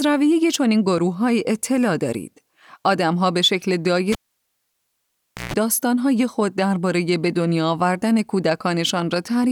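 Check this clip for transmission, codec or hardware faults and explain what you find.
One hardware fault stands out in this speech clip: a cable pulled and plugged in, from 4.12 to 5.54 s.

A pop opens about 1.36 s of near silence as the live lead is withdrawn. Then roughly 0.14 s of 60 Hz mains buzz appears while only the plug tip makes contact, and a second pop comes as the sound returns. A waveform shows two sharp spikes around a flat gap. A spectrogram shows vertical broadband lines at the pops and horizontal stripes at 60 Hz and its harmonics during the buzz.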